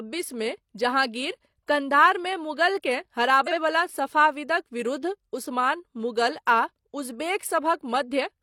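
The clip is speech with one fault: frames out of order, from 3.46 to 3.57 s. Two adjacent chunks of about 42.7 ms each were decoded in swapped order, which points to single frames exchanged. The later piece plays before the earlier one. This gives a brief garbled flutter. The timing around it stays intact because nothing is lost, only reordered.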